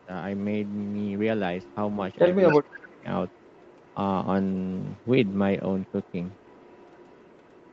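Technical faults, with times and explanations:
2.48–2.87 s and 5.86–7.72 s, echo leak: A delayed copy of the speech follows it 281 ms late. The first burst is about 15 dB below the speech. The later stretch is much fainter. Likely a loudspeaker echo that the canceller did not fully remove.
2.53–3.06 s, speech suppressed in double talk: The main speech drops sharply, by around 25 dB, and breaks up for under half a second in total. It overlaps the echo burst. The echo canceller likely could not separate talker from echo, so it turned both down.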